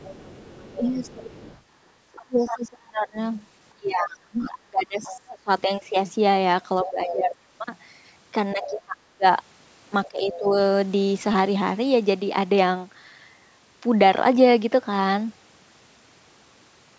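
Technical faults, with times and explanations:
0.0–2.59 s, 4.39–5.16 s, 6.85–7.36 s, 8.63–8.81 s and 10.05–10.38 s, other side's voice leaking through: a second voice sits about 10 to 20 dB below the talker, likely loudspeaker echo that the echo canceller left in the microphone signal.
0.77–5.48 s, 6.84–7.35 s and 8.53–10.54 s, speech suppressed in double talk: the talker dips in level, by about 30 dB at worst, over roughly 4.5 s in total while the other side speaks, likely because the echo canceller turned down both voices together.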